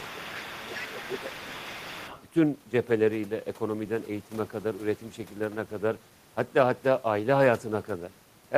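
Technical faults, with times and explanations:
0.00–2.23 s, other side's voice leaking through: a faint second voice sits about 15 dB under the talker, likely loudspeaker echo the canceller missed, visible as weaker overlapping harmonic traces.
0.11–0.61 s and 0.78–1.35 s, speech suppressed in double talk: the talker dips by roughly 10 dB, likely the canceller ducking both voices, showing as shrunken waveform envelope and faded spectrogram bands.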